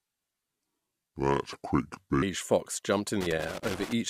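From the start up to 2.22 s, the speech runs at the wrong speed: it plays at about 0.675 times its proper rate, so it drags and the pitch drops by roughly seven semitones, giving a deep, sluggish quality. That kind of shift most likely comes from the section being resampled or played against the wrong clock. Speed and pitch jump back to normal right as "fox jumped in" arrives.

Shortly after "fox jumped in", from 3.21 to 3.93 s, there's a burst of loose connector crackle, an uneven scratchy fizz. That's the sound of a dodgy contact rapidly making and breaking, chopping the signal on and off, with any DC on the line adding clicks each time it reconnects.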